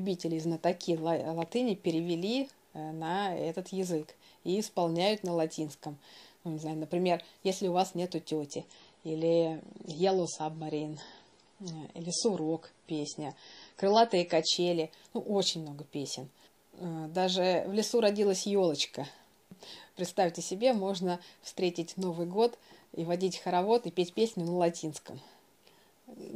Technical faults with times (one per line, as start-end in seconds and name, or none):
8.52-14.52 adaptive stream at a lower bitrate